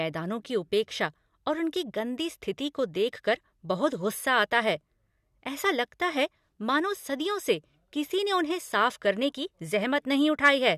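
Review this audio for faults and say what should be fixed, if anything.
Nothing needs fixing, since the speech signal shows no technical faults anywhere in the recording.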